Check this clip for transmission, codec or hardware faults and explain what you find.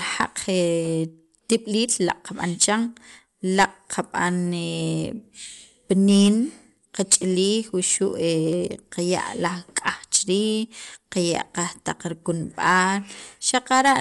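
One fault runs through the whole clip. The speech sounds dull, with nothing above 11.5 kHz. A rough, fluttering noise clings to its tonal parts. The likely cause is Dolby Digital compression at a low bitrate, fitting about 64 kbps. The encoder narrowed the band and gave many frequency lines no mantissa bits. The decoder then filled those lines with noise.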